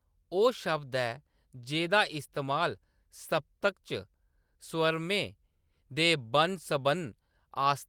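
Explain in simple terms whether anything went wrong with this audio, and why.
Listening to the recording, nothing stood out as having gone wrong, so there is nothing to explain here.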